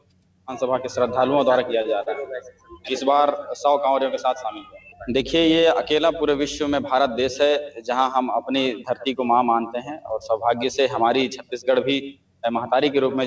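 Throughout, held sounds and tails flutter and thin by a few decibels: a noise suppressor applied to music or sounds mistakes steady content for noise and keeps pulling it down. From 0.0 to 0.47 s the opening sinks by about 12 dB, as the noise suppressor cut this sound more deeply than the rest. At 1.82 to 1.87 s and again at 2.03 to 2.08 s, the sound briefly hangs for 27 ms and then 35 ms. Each is a short stall from a late packet: the jitter buffer ran dry and the last sound was stretched until the packet arrived, with nothing lost. Between 2.52 and 2.7 s the suppressor cuts in again by about 10 dB, and from 12.13 to 12.43 s a sound is pulled down by about 12 dB. The call codec path leaves nothing above 8 kHz.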